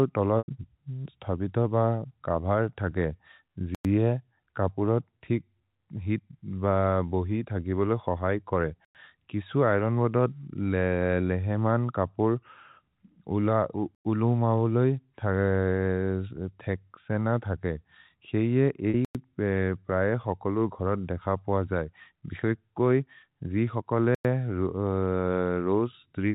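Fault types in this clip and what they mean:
Packet loss with pitch repetition: Lost audio is bridged by repeating the last pitch period, so the 40 ms hole at 18.9 s, just after "थगे क्सेइए", sounds like a brief held buzz, while the 100 ms one at 0.38 s fades into silence before speech returns with a short cross-fade. This fill and their irregular timing set them apart from chunk gaps.
Gap between chunks: Silent holes of 100 ms fall every 5 s, at 3.75, 8.85, 13.95, 19.05 and 24.15 s, at each chunk join. No sound is lost, and unlike the packet-loss fill these holes are empty and evenly spaced.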